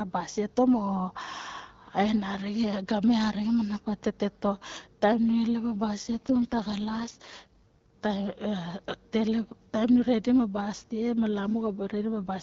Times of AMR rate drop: 6.03-7.88

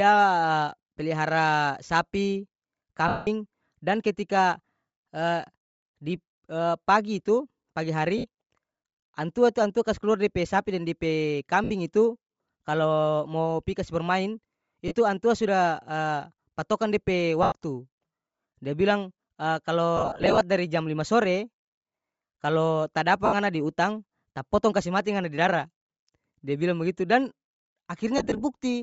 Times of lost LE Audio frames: 3.08-3.27, 8.18-8.25, 11.64-11.70, 14.88-14.93, 17.43-17.52, 19.97-20.41, 23.26-23.34, 28.18-28.42

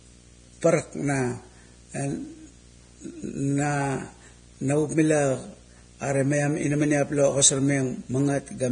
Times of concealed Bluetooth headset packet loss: none

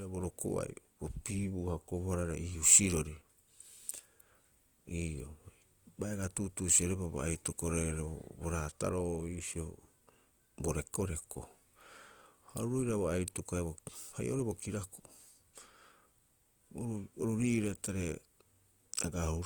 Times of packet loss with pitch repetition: none

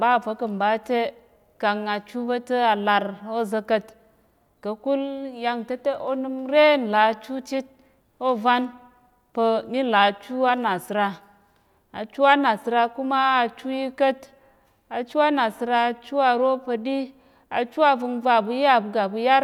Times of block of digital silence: none

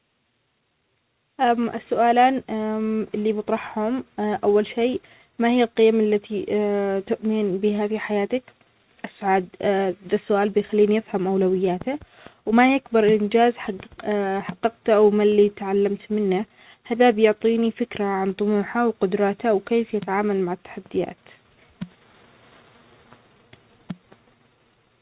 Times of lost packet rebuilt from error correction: none

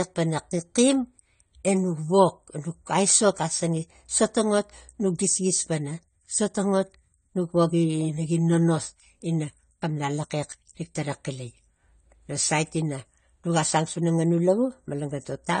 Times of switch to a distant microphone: none

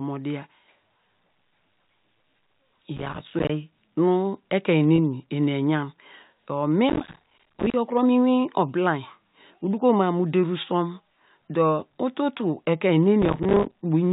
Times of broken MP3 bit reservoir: none

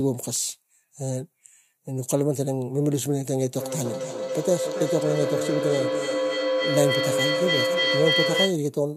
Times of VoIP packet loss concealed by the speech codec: none

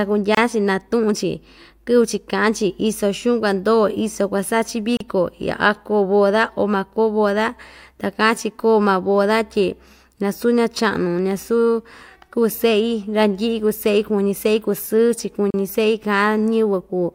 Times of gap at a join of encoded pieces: 0.35-0.37, 4.97-5.00, 15.50-15.54

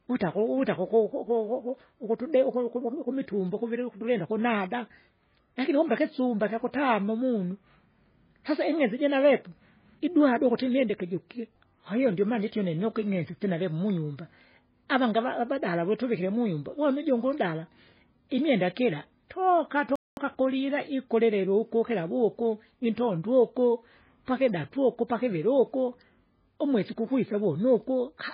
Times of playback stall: 19.96-20.17

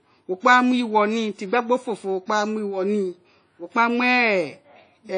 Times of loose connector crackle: none

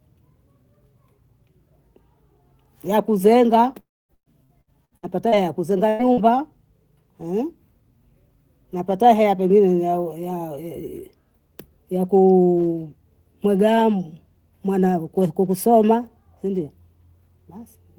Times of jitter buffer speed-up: none

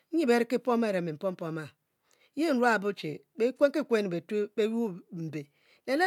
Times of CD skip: none

